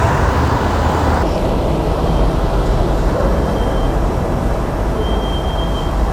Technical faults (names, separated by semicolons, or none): section at the wrong speed